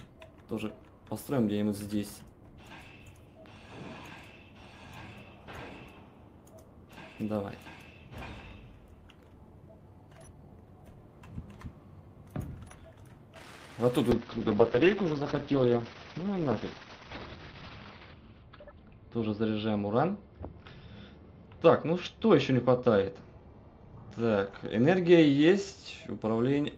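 At 14.12 s a call bitrate drop sets in and lasts to the end. The encoder coarsens and the audio band shrinks from 20 kHz to about 6 kHz, which fits a fall from roughly 40 to 7 kbps. The sound turns muffled and watery, worst for about 3.8 s.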